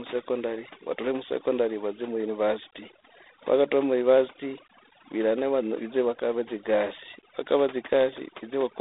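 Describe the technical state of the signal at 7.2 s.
At 7.2 s, as throughout the clip, overdone noise removal is audible. The suppressor cuts any frequency band it judges close to the noise floor, so the gaps fall to near silence with twinkling specks, and the speech loses its quieter components as they are stripped away.

G.726 ADPCM coding is also present at 7.2 s and across the whole clip. Each sample is coded as a coarse difference from a prediction, leaving a harsh, rasping hiss that rises and falls with the speech, which points to the 24 kbit/s mode. The band runs from 250 Hz to 3.7 kHz, with nothing above 3.8 kHz.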